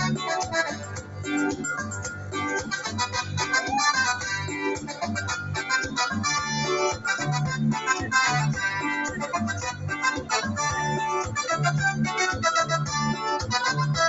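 Throughout the clip, a noise suppressor applied to music or sounds treats sustained, steady content as noise, so the level swings by roughly 10 dB. Attacks pass while held parts and tails sink, which gives a pumping, thinning effect rather than a steady gain change.

The sound is cut by the noise suppressor at 0.72–1.28 s (about 11 dB deepest), 1.82–2.35 s and 4.76–5.03 s (about 8 dB each), and 9.09–9.27 s (about 6 dB). Each is a sinking level or a shortened decay, not a clean silence as in a dropout.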